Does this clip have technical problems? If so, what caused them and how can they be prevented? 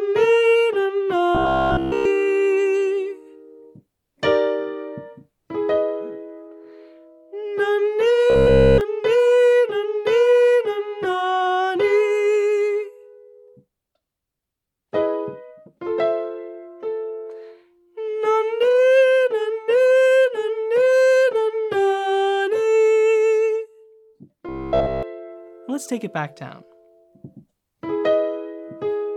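Yes, there's robotic sound from repeated short buffers in three spots: 1.35 to 2.05 s, 8.30 to 8.81 s, and 24.49 to 25.03 s. Each stretch collapses into a rigid, metallic buzz around 66.7 Hz, with basically the whole stretch replaced. The likely cause is fresh audio not arriving in time, so the playback side kept looping a roughly 15 ms chunk, which fits that 66.7 Hz pitch. To prevent it, give the stream a bigger jitter buffer and make sure the audio thread isn't starved by CPU or network hiccups.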